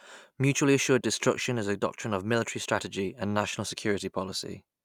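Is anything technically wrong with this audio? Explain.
No, nothing technically wrong can be heard in this speech clip. No fault stands out at any point in it.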